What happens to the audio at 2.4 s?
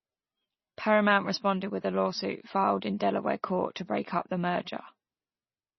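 At 2.4 s the speech carries the same heavy MP3 compression damage heard across the whole clip. The encoder appears starved of bits, which fits a very low bitrate of about 24 kbps, so it discards everything above 5.9 kHz and drops weak frequency lines that blink in and out between frames. The result is dull, watery, swirling speech with chirpy sibilants and smeared onsets. A spectrogram would show a flat ceiling at 5.9 kHz and speckled gaps below it, most likely from MP3 coding.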